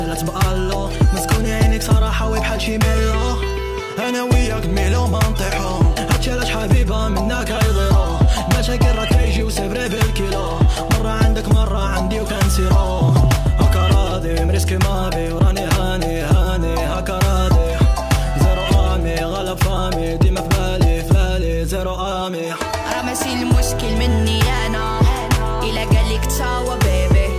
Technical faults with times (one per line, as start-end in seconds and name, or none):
none